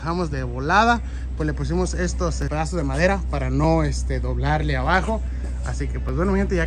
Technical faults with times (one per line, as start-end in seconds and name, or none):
1.20-6.09 clock drift buffer slips